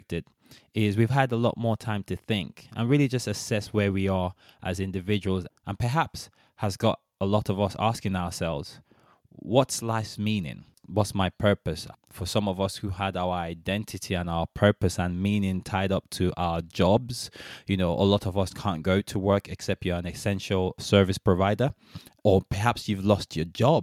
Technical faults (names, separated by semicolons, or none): none